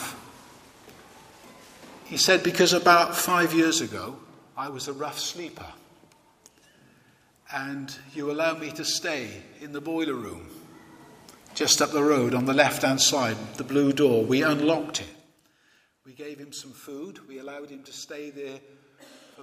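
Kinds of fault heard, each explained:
Zipper noise: The level is moved in small discrete steps with no smoothing between them, so each jump leaves a tiny click. Here the steps come at roughly 30 per second, making a fine ticking buzz that rides on the sound. It appears from 3.52 to 4.16 s, as the level drops by about 10 dB in steps of about 1 dB. It returns from 10.24 to 11.16 s, as the level rises again by about 10 dB.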